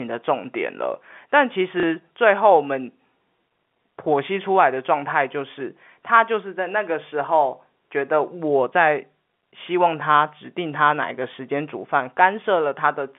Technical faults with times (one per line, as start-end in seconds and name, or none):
1.80-1.83 packet loss with last packet repeated